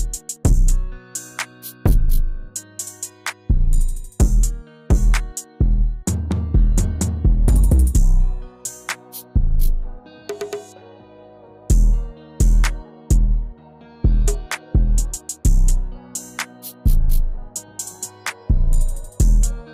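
No technical faults can be heard anywhere in this audio, so there is nothing to describe in time order.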